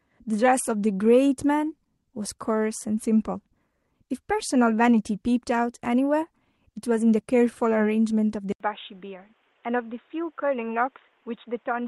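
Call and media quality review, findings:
Input switched to a poorer device, 8.52 s to end at 11.88 s: speech turns dull and boxy after an 80 ms dropout. Spectrogram shows content stopping abruptly at 3.8 kHz, with a new noise floor roughly 35 dB below signal. Waveform shows a gap, then level about 5 dB lower. Likely an OS/device reroute to a band-limited mic or headset call profile.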